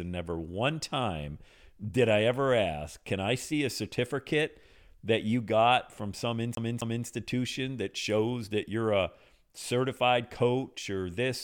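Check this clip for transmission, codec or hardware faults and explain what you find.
One hardware fault is present, a CD stuck on one turn from 6.55 to 7.06 s, just after "you got from some". A scratch knocks the laser back a track on each rotation, so a 0.26 s slice of speech plays twice, with a brief mute at every jump, giving a quick, even skipping-disc stutter.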